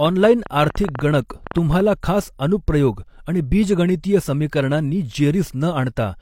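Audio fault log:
0.06–1.81 s: train of clicks, about 8 per second at an uneven pace, roughly fifteen in all, ticking over the speech and the gaps, standing roughly 10 dB above the signal, ending just before "खास अनुप्रयोग आणि बीजगणितीय"; likely interference or a faulty connection or supply injecting repeated pulses.
0.49 s and 1.53 s: pre-echo, a brief hiss spreading about 12 ms and 17 ms ahead of sharp attacks, which sound smeared; a transform codec spread its block's quantisation noise, sized for the loud onset, into the quiet moment before it.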